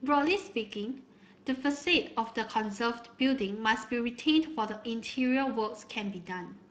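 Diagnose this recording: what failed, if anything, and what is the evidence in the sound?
The speech sounds grainy and hoarse for the whole clip, and the damage is plainly audible. This points to the codec stage, Speex codec compression at a middling rate of roughly 22 kbps, where the CELP excitation gets too few bits and leaves a rough, noisy texture.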